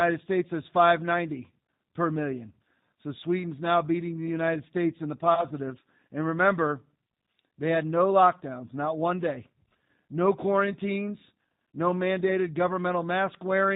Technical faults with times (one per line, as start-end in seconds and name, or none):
0.00-13.76 G.729 codec
5.35-5.46 VoIP packet loss concealed by the speech codec